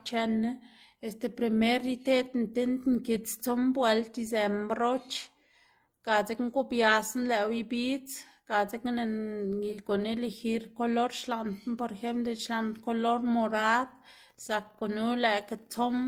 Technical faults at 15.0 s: transcoding between lossy codecs

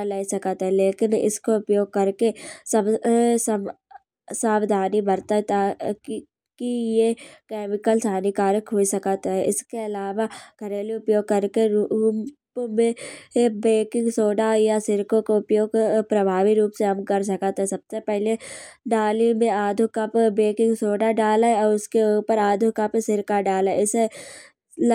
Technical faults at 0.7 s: none

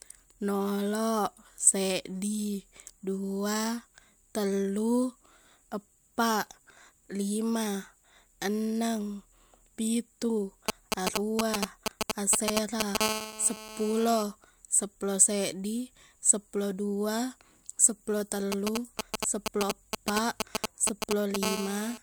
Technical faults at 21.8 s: GSM phone buzz

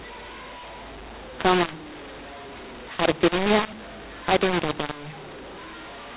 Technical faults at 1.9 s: mu-law and A-law mixed up

